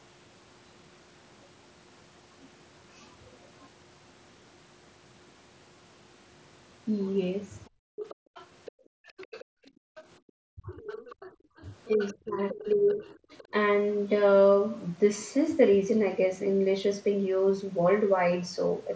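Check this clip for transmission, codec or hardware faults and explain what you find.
The clip is speech carried over a wideband Bluetooth headset link, band-limited at 8 kHz, and it shows three echo-canceller faults clustered between 7.65 and 13.52 s.

Other side's voice leaking through, from 7.65 to 10.03 s and again from 10.72 to 13.44 s: a second, fainter voice sits roughly 20 dB under the talker, secondary. The likely cause is the far end playing on the talker's loudspeaker and reaching the microphone, with the echo canceller failing to subtract all of it, so residual echo survives into the send path.

Background gated by the echo canceller, from 7.7 to 10.27 s and from 11.33 to 11.57 s: the room tone sinks and disappears in patches, by about 40 dB at worst in the first stretch, totalling around a second and a half, and by about 23 dB in the brief second dip. The canceller clamped the microphone hard while the loudspeaker was active, releasing it once playback eased.

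Speech suppressed in double talk, from 10.55 to 10.82 s and from 11.88 to 13.52 s: the talker's own voice drops sharply, deeply in the short first event and by roughly 20 dB over about a second in the second, while the leaked voice is present. Both sides were likely talking at once, and the canceller, unable to separate near speech from echo, attenuated everything.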